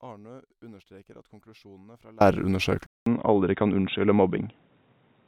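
The clip opens in an audio dropout to a faint residue, already under way at the start and lasting until 2.21 s. Only a faint leak of the speech remains, around 30 dB below its normal level. The line stays live through the gap. The wanted signal is simply not getting through. At 2.21 s the speech returns abruptly, with no fade. The likely cause is a loss of the source while the path after it kept running.

At 2.86 s the input is switched to a poorer device, likely another microphone or a headset's call profile. A short silence of about 200 ms marks the switch. From there to the end, nothing reaches above 3.8 kHz. The speech sounds dull and boxy. The loudness stays about the same. A new background noise appears, roughly 40 dB below the speech.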